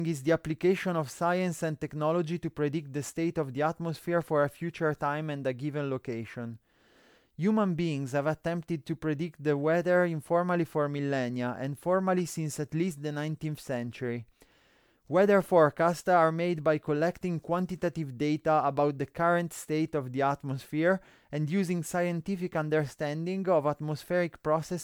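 Speech throughout sounds swirly, hollow and smeared, with blurred attacks and nothing above 20.1 kHz; likely generation loss from roughly four MP3 re-encodes near 128 kbit/s.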